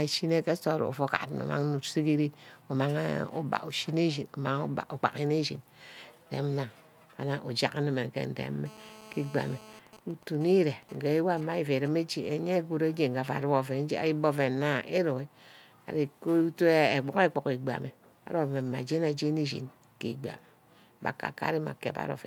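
Speech carries a GSM phone buzz from 8.66 to 9.79 s: a hard, raspy tone at 216.7 Hz sitting about 21 dB below the speech. A nearby 2G phone in a call is pulsing its transmitter at that rate, and the audio circuit rectifies each radio burst. On a spectrogram it shows as a dense comb of horizontal lines at multiples of 217 Hz, and on the waveform as a regular train of pulses. From 9.87 to 11.88 s come GSM signalling bursts, even ticks with a longer 217 Hz buzz twice a second around 20 dB down. The phone's user has gone silent in the call, so only brief groups of bursts are sent. These appear as intermittent clusters of vertical streaks and harmonic stripes on the spectrogram.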